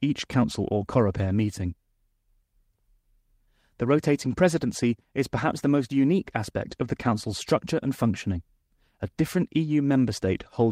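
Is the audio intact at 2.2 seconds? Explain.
Yes, the speech at 2.2 seconds is intact, with no audible fault at that moment.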